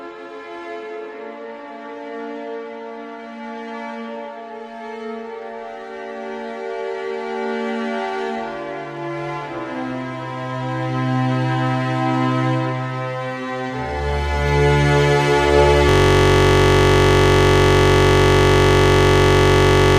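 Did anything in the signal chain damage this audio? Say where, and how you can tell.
Yes. A system hang loop starts at 15.89 s and runs to the end. The driver or system froze while the audio hardware kept replaying one 21.33 ms stretch of its ring buffer, which fits a 1024-sample buffer. The result is a steady buzz at 46.9 Hz, repeated nearly 200 times.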